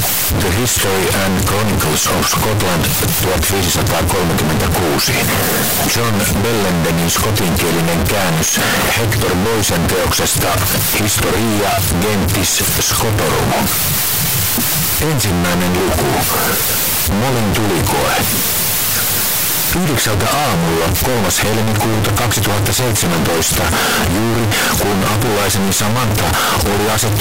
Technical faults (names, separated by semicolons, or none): float read as integer